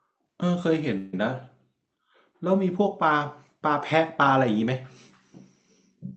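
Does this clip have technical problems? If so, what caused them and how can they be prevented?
Yes. A call audio freeze occurs from 0.97 to 1.14 s in this speech clip: the last sound is drawn out as a fading buzz for about 156 ms, then the speech resumes exactly where it stopped, so nothing is lost but the rest of the clip runs about 156 ms later. The likely cause is packets delayed in transit, emptying the jitter buffer so the receiver had to fill the gap. The audio is band-limited at 8 kHz, consistent with Opus at around 32 kbps. Prevention: give the call's traffic network priority and allow the jitter buffer enough target delay to absorb bursts of late packets.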